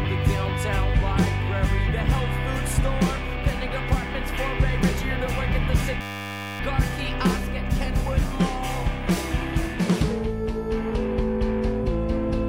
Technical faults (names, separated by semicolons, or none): system hang loop